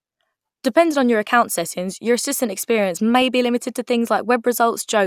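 A brief burble disrupts the speech at 3.21 s, between "settings your assistant experience" and "be limited to". This is DAB burbling: bit errors at about 0.07 percent slipped past error correction, corrupting the audio data so individual sub-bands picked up short blips of noise.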